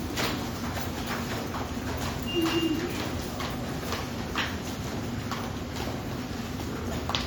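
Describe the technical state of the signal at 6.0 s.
At 6.0 s the signal is intact, with no audible fault in this everyday sound at that moment.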